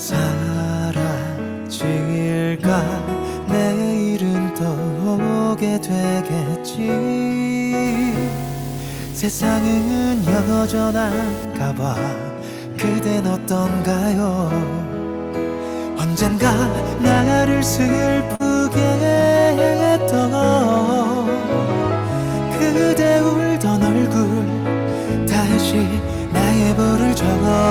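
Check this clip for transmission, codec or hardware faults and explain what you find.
Two faults can be heard.

From 7.86 to 11.45 s there is video or display buzz. A screen or video cable is leaking into the audio path. It gives a 50 Hz field-rate buzz with hash above it, plus a thin 15.6 kHz line tone. It sits roughly 15 dB under the sound.

At 18.35 to 18.42 s there is a short concealed packet loss. About 40 ms of audio arrived too late to decode. The receiver bridged the gap by extending the preceding sound, then faded back in. It is heard as a brief smear or wobble.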